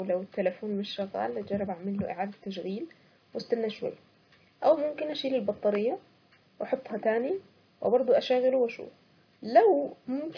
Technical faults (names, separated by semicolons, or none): none